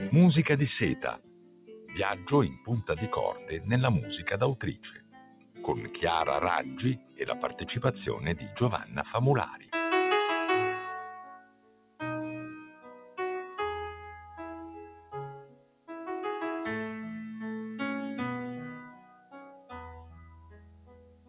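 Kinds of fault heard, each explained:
Noise suppressor applied to music or sounds, throughout: a speech-tuned suppressor stays active and treats sustained, steady sound as noise, so level swings by around 20 dB. Onsets pass while held parts and decays sink, giving a pumping, thinned texture.
Sound cut by the noise suppressor, at 1.17–5.96, 6.66–7.62, 8.36–9.72, 11.26–12.0, 12.66–13.18, 14.92–15.89 and 18.91 s to the end: here the suppressor misjudges sustained sound as noise and pulls it down by up to about 17 dB (about 10 dB at 12.66 s), sinking held sounds or cutting tails short.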